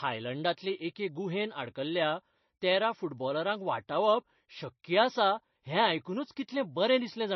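Heavy MP3 compression runs through the whole of this speech clip, and the treble stops dead at about 5.9 kHz, which points to a low bitrate somewhere near 26 kbps. The sound is watery and swirly, with metallic chirps on s sounds and smeared attacks, likely from an encoder starving its weaker frequency lines. A spectrogram would show a flat ceiling at 5.9 kHz with speckled, flickering holes beneath it, while the waveform would look largely ordinary.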